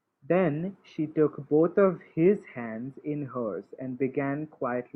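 No technical faults can be heard anywhere in the recording, which stays continuous and stable throughout.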